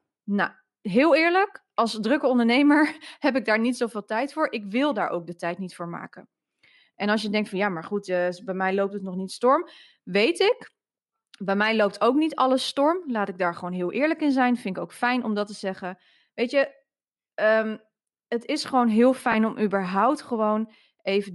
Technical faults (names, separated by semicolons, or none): Bluetooth LC3 compression; lost LE Audio frames